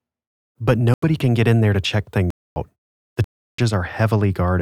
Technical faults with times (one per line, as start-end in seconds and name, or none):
0.94-1.02 block of digital silence
2.30-2.56 block of digital silence
3.24-3.58 block of digital silence